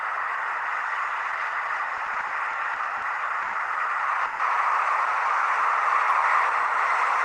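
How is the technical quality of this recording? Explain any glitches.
The recording has three transport glitches, all concealment of late audio rather than lost audio.

From 1.97 to 3.04 s there are repeated stalls (stutter): eight brief holds, the longest 60 ms, totalling 190 ms, about 18% of that stretch. Packets kept arriving slower than playback, so the buffer repeatedly emptied and the last sound was extended. Unlike a freeze, it is a dragging, hiccupping run of many short catches.

At 3.42 to 3.55 s and 4.25 to 4.41 s, a call audio freeze holds the sound for 110 ms and then 140 ms as a fading buzz or hiss, never dropping to silence, before the audio resumes where it stopped. This is likely a single delay spike emptying the jitter buffer each time, which distinguishes it from the stutter's cluster of small gaps.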